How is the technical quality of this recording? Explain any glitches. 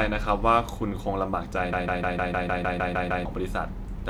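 The recording has one clear glitch, a broken-record loop. From 1.73 s to 3.25 s, a fragment of about 153 ms of speech repeats exactly, back to back, ten times. It sounds like a stuck stutter, the same tiny slice hammering out at a steady rate. The likely cause is a stall in the player, encoder or stream. During the stall, it kept resending the last piece it held. The speech that belonged in that stretch is gone.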